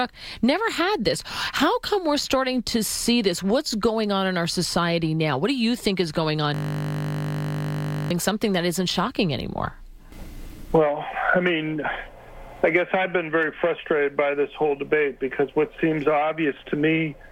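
The system froze from 6.54 to 8.11 s while the hardware kept cycling one 20 ms buffer. This system hang loop sounds like a steady 50 Hz buzz.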